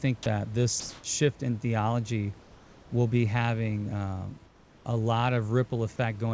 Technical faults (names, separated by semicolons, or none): comfort noise in place of the background